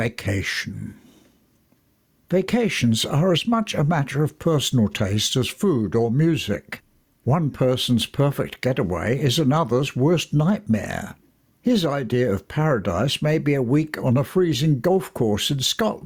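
The input gain is likely set far too high, so a fast limiter clamps down on every loud sound throughout. That gain pumping swings the level by around 10 dB, and everything sounds squashed.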